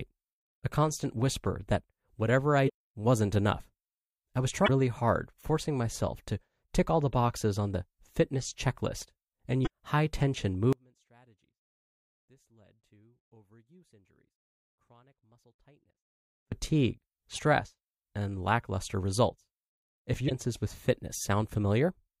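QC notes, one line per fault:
2.65–2.70 s, 4.64–4.69 s, 9.63–9.67 s, 17.35–17.39 s and 20.26–20.32 s: damaged data in a compressed stream. Each is a short glitch of about 40 to 60 ms. The first falls between "whisper that whatever I" and "wasn't enough". The second falls between "I was" and "hard forcing myself to". Corrupted bytes make the decoder misread those frames. It then loses sync and hunts for the next valid frame header. That produces the blip.
10.73–16.52 s: audio dropout to a faint residue. The speech cuts off abruptly right after "high tension" and stays gone for about 5.8 s. Only a faint trace remains, roughly 35 dB below normal level. It then snaps back mid-flow rather than fading in. The likely cause is that the wanted signal was lost upstream while the path after the break stayed live and passed this faint sound.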